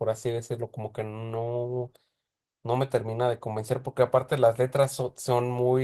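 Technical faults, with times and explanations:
Throughout, Opus voice compression: the speech has a plainly audible hoarse, slightly robotic edge. The lower band sounds like it went through SILK's linear-prediction coder with a coarsely coded excitation, while the top end above 8 kHz is still there but only thinly coded by a CELT layer on top. That hybrid split at such a tight budget points to something around 16 kbps, and the texture fits 20 ms frames.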